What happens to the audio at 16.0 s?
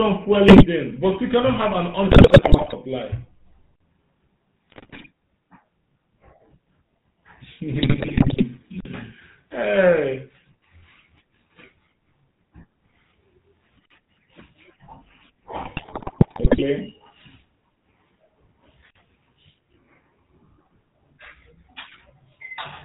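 Around 16.0 s you're in a burst of GSM bit errors, from 15.62 to 16.63 s. Corrupted filter, pitch and gain values break the speech into squawks, pops and gargling. Underneath it all, the GSM full-rate codec runs throughout, cutting everything above 4 kHz and giving the voice a buzzy, gravelly roughness.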